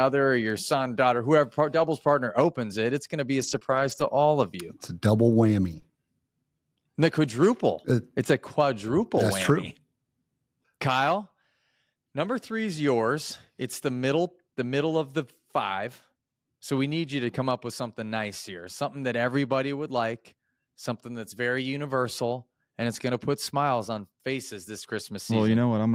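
At 1.79 to 1.85 s the sound turns briefly rougher and grainier without any gap, and the same coarse texture returns from 3.39 to 3.57 s, just after "going to be", again from 3.63 to 4.10 s, and at 5.72 to 5.77 s, just after "a double". Each is a lost packet rebuilt from error correction. The packets went missing, but the following packet carried a low-bitrate copy that the decoder played instead. The longest stretch, about 240 ms, points to roughly a dozen separate packets.

Between 3.59 and 3.74 s, and again at 5.80 to 5.84 s right after "a double", there is a short smear or wobble where the audio briefly carries itself forward. This is short concealed packet loss. About 20 ms never arrived, and the receiver extended the preceding sound to bridge the hole. The first instance filled 13 ms and stretched the timing by a few milliseconds. The second filled 24 ms before blending back into the real signal.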